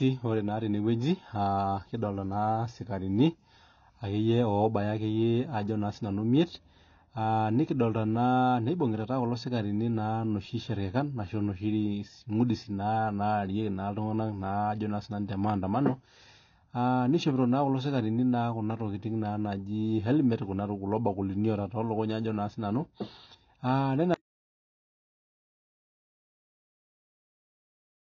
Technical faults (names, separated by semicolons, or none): AAC compression; audio dropout to silence